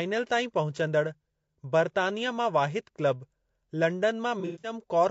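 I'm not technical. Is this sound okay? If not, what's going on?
No. Low-delay AAC compression runs through the whole clip: the speech sounds plainly rough and grainy, likely from the kind of low-delay compression video calls use, whose very short chunks of audio can't capture the fine tonal detail of a voice.

AAC frame loss with concealment occurs from 4.40 to 4.73 s: pieces of audio adding up to 180 ms went missing across about a quarter of a second, the longest around a tenth of a second. The player patched them from earlier sound, leaving a smeared, noisy stretch.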